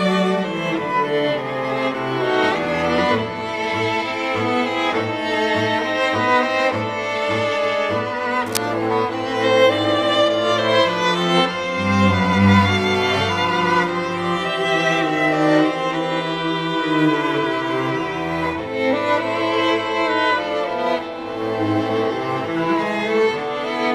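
At 8.46 s a burst of cable scratch noise cuts in and lasts until 8.63 s, about 0.17 s. It sounds like a brief, harsh scratching or rustling laid over the sound, only a little quieter than the signal itself. The likely cause is a worn cable, connector or control being moved, its contact resistance fluctuating rapidly. A spectrogram would show a dense, ragged smear of broadband energy. The waveform would show irregular spiky bursts.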